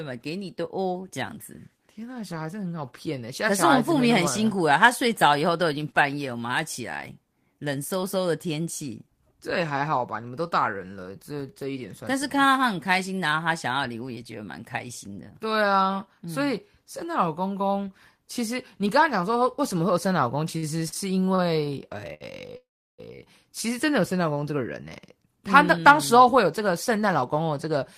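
Short stalls from late packets come at 20.57 to 20.64 s, 20.88 to 20.94 s, 21.35 to 21.41 s and 22.14 to 22.23 s. Each time the next packet had not arrived, the jitter buffer ran dry, and the receiver stretched the last sound to fill the wait: 50, 39, 32 and 66 ms. The speech then resumes where it left off with nothing lost, so each stall sounds like a syllable held a beat too long, with a faint buzz or dip.

A call audio freeze follows from 22.57 to 23.00 s. The sound is held on as a fading buzz, then drops to silence for about 340 ms of the 419 ms gap before speech picks up exactly where it stopped. This is likely packets held up in transit long enough to empty the buffer completely. The result is a pause inserted into the speech rather than anything cut out, adding 419 ms of delay.

A jitter buffer speed-up runs from 24.81 to 27.79 s. After the stalls the buffer was holding more audio than it aims for, so the receiver trimmed many tiny slices, each one or a few pitch periods long, about a fifth of a second in total. 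The speech plays at about 107% speed with unchanged pitch and sounds slightly hurried.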